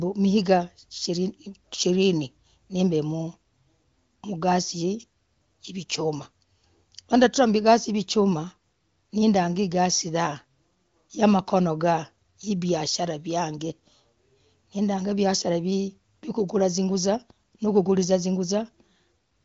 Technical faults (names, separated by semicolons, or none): none